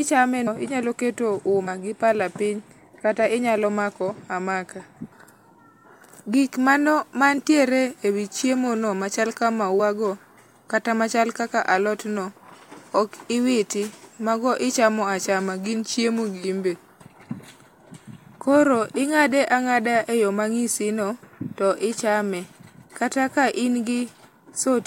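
Compressed frames skipped in this speech at 0.46 s (before "inyalo keto"), 1.66 s (between "inyalo keto" and "gi pala piny kata") and 9.79 s (after "chiemo no machal ka"). The audio jumps ahead about 100 ms, then twice about 50 ms, which fits dropped 26 ms frames. Overlapping frames smear each join into a short blip.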